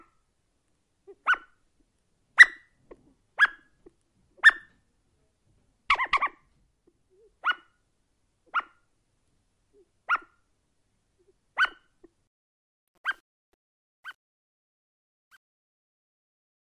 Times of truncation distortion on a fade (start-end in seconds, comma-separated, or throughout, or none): 12.27-16.67